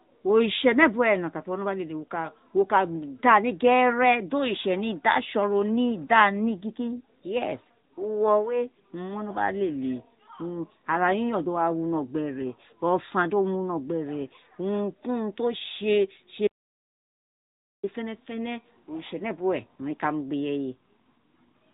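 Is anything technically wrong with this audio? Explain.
Yes, two faults. Throughout, the speech has passed through the AMR narrowband mobile codec, which rebuilds speech from a vocal-tract model driven by sparse pulses. The damage is plainly audible: nothing above 3.8 kHz survives, and the buzzy, synthetic edge fits a mid-rate mode around 10 kbps.

From 16.47 to 17.83 s there is an audio dropout to silence. The input was likely lost through a broken link or device while recording continued writing silence. The speech cuts out abruptly, leaving 1.36 s of total silence with no room tone, then resumes mid-flow.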